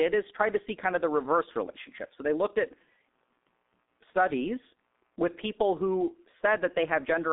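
Throughout the speech, the sound is muffled and hoarse, with smeared consonants and nothing above 3.8 kHz. This is heavy G.723.1 codec damage: a narrow 250 Hz to 3.7 kHz telephone band and a slowly updated voice model, consistent with about 6.3 kbit/s.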